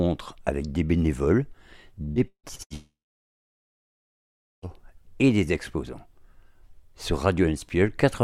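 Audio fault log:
2.03–2.73 s, repeated packet loss (robotic sound): five short gaps, the longest 155 ms, patched by repeating sound, so half the span turns choppy, with audio returning between gaps.
2.74–4.78 s, long network dropout: one unbroken gap of about 1.9 s, a brief fading continuation and then about 1.7 s of silence, likely from lost network delivery rather than scattered gaps.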